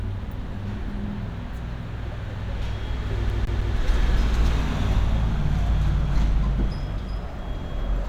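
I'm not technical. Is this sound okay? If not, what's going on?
No. From 3.30 to 3.76 s the audio gets stuck like a CD stuck on one turn: playback keeps jumping back to the same spot instead of moving forward, the way a scratched disc throws the laser back a track. The result is one short slice of sound, about 0.16 s long, played three times in a row with a tiny gap at each jump. You hear it as a quick, even stutter before the sound carries on.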